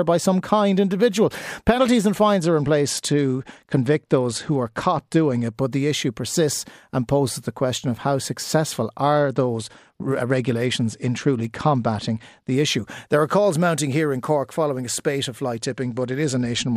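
From 2.36 to 5.55 s, 9.13 to 12.55 s and 15.59 s to the end, the speech dulls and turns gritty, a Bluetooth SBC bit pool drop that fits a fall from 31 to 12, near 88 kbps. Unlike a plain bandwidth cut, coarse quantisation grit accompanies the lost treble.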